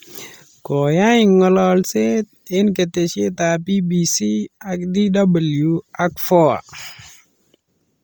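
Throughout, the speech has a breathy, grainy edge from heavy Bluetooth LC3 compression, likely at around 32 kbps; a spectrogram shows noisy, patchy upper bands stopping near 20.4 kHz.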